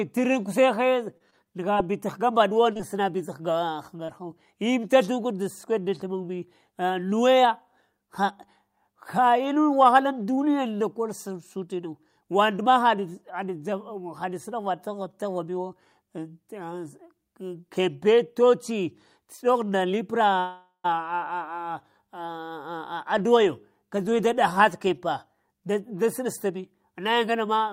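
From 1.17 to 1.84 s there is repeated packet loss with a robotic sound. Four gaps, the longest 26 ms, lose about 40 ms of sound, patched with 86 ms of continued audio. On a spectrogram, harmonics turn smeared and too regular in short patches, and the waveform shows repeated cycles.

Short concealed packet loss follows at 2.73 and 2.77 s, back to back, then at 3.97 and 4.05 s. Each drops about 20 ms that the decoder rebuilds from the preceding sound. Each leaves a brief smear or wobble and a blurred spectrogram column.

From 20.40 to 20.86 s a call audio freeze adds a 446 ms pause. The jitter buffer ran dry, likely because packets were held up in transit. The last sound trails off as a fading buzz or hiss into about 110 ms of silence, then resumes with nothing lost. The waveform shows a decaying tail and a flat gap.

A jitter buffer speed-up runs from 24.60 to 25.62 s. Repeated cuts of one or a few pitch periods remove about a tenth of a second, so the sound plays at 108% speed with unchanged pitch and seems hurried. 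Syllables sit visibly closer together while harmonic spacing stays the same.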